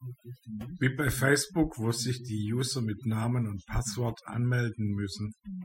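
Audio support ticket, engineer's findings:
Overdone noise removal throughout. Background gated to near silence with twinkling specks; quiet speech detail lost. Noise reducer set too strong, zeroing bands near its noise estimate. Spectrogram: speckled, patchy holes, isolated bins flickering against black floor.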